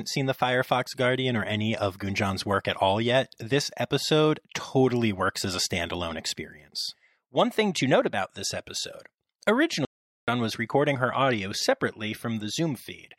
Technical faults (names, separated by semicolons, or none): audio dropout to silence